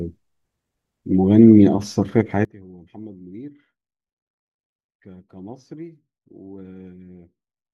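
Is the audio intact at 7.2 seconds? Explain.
No. At 7.2 seconds the clip sits inside a sudden gain jump. It begins at 2.45 s and lasts to the end of the clip. The level drops by about 21 dB in a single step, with no fade. The speech and the background noise fall together, so everything after 2.45 s sounds much quieter. The likely cause is a digital gain change applied from one sample to the next without a ramp.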